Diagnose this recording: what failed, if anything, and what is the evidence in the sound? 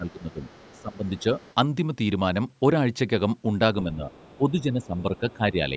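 The talker's level dips at 0.00 to 0.41 s, 0.75 to 1.24 s and 3.83 to 5.74 s, by roughly 15, 20 and 10 dB at the deepest. This is speech suppressed in double talk, likely from the call-processing echo canceller turning everything down while both sides spoke.

A second, faint voice sits about 30 dB under the talker at 0.20 to 1.54 s, 4.12 to 4.51 s and 4.82 to 5.33 s. This is the other side's voice leaking through: loudspeaker playback picked up by the microphone that the echo canceller likely failed to remove completely.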